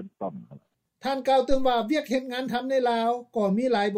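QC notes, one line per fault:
1.51–1.75 s phantom power thump: supply step through the coupling capacitors, deep thump peaking about -16 dBFS, decaying in 54 ms; one slow waveform swing, low-only spectrogram smear.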